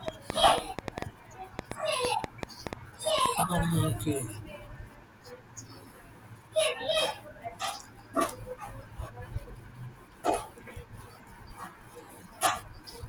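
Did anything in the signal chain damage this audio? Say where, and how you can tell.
Yes. A train of clicks, about five per second and unevenly spaced, pops loudly over the speech from 0.08 to 3.27 s, likely interference entering the analogue wiring.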